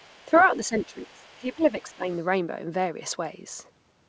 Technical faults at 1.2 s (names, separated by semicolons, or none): speech suppressed in double talk; other side's voice leaking through